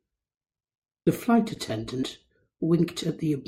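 At 1.06 s the speech lurches forward past roughly 0.4 s of material. At 2.02 s a smaller jump skips about 0.1 s. These are compressed frames skipped: whole frames went missing or were rejected by the decoder.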